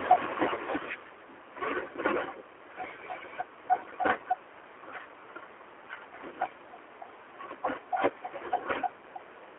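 G.729 codec damage runs through the whole clip: the speech is squeezed into a roughly 300 Hz to 3.5 kHz telephone band and rebuilt from a filter model and sparse pulses, giving the plainly rough, synthetic texture that fits an 8 kbit/s coder. The fader-like level changes come through this coding.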